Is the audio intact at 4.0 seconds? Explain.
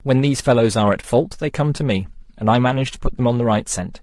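No. At 4.0 seconds the speech is rough and grainy, with a hiss-like noise filling the gaps between the voice's harmonics and a top band that sounds dulled and somewhat synthetic. This coarse texture runs through the whole clip, so it is present at that moment too. The likely cause is low-delay AAC compression (AAC-ELD), at a rate that fits roughly 32 kbps. Its very short frames cannot separate closely spaced pitch harmonics cleanly, and too few bits remain to code the upper frequencies faithfully.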